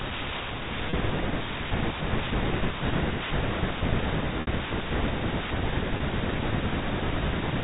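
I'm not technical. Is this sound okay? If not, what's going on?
No. Packet loss with pitch repetition occurs at 0.90–0.93 s, 4.41–4.47 s and 5.97–6.00 s. Chunks of the speech went missing in transmission (30 ms, 60 ms, 30 ms), and the receiver filled each gap by repeating the last bit of voice. The two short gaps come out as a brief held, buzzy blip, while the longer one fades into silence before the speech returns. The telephone-style sound itself comes from the phone line's normal coding.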